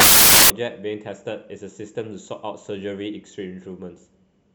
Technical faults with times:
0.00-0.50 samples built from the wrong bytes

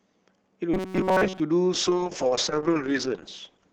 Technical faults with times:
0.74-1.40 robotic sound from repeated short buffers
1.74-3.72 call bitrate drop

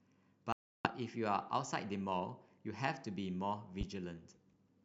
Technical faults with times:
0.52-0.88 Bluetooth stall
3.81-3.84 loud pop

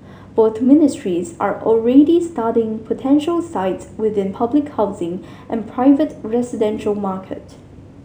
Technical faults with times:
0.00-8.04 imaging from linear upsampling

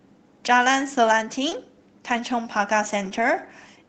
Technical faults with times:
1.49-1.53 short concealed packet loss
1.51-1.53 lost packet rebuilt from error correction
3.05-3.23 lost packet rebuilt from error correction

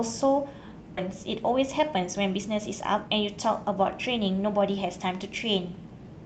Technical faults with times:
0.97-0.99 skip ahead
1.07-5.20 jitter buffer speed-up

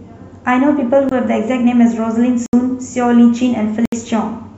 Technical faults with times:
1.09-1.11 block of digital silence
2.46-2.53 block of digital silence
3.85-3.92 block of digital silence

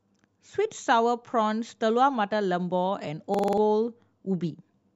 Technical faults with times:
3.34-3.58 system hang loop

